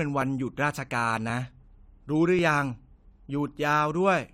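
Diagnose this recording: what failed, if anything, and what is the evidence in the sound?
Driver or buffer stage: a regular click in the speech every 1.08 s, about four between 0.22 and 3.48 s, likely clock drift buffer slips dropping or repeating a few dozen samples.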